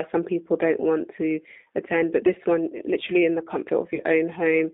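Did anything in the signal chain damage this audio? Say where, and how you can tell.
Yes. At the codec stage, G.729 at 8 kbit/s rebuilds the speech from a filter and pulses, sounding rough and synthetic; a spectrogram shows an empty band below 250 Hz and above 3.6 kHz throughout.

On the network, VoIP packet loss concealed by the speech codec at 3.95–4.02 s: about 40 ms went missing, which fits two lost packets. The decoder stretched the last sound into a fading buzzy tone or coloured noise, seen as a decaying waveform envelope.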